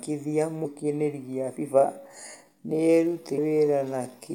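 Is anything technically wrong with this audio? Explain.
Yes. There are two kinds of fault. At 0.64 s and again at 3.37 s, a brief blip breaks the speech. This is damaged data in a compressed stream: the decoder misreads corrupted frames, loses sync and jumps to the next frame header. From 1.75 s to the end, the pace abruptly drops to about 0.65 times normal while the pitch holds, leaving the speech dragging. This is a time-stretched section, likely from software lengthening the audio by repeating short pieces.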